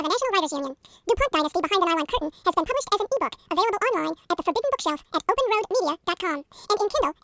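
Speech runs throughout at a wrong sample rate: everything plays exactly twice as fast and a full octave (12 semitones) higher, which fits audio recorded at 8 kHz being played back at 16 kHz without conversion. Unlike a pitch shift or a time-stretch, which alter only one dimension, here speed and pitch rise together by the same ratio, so the voice sounds both chipmunk-high and hurried.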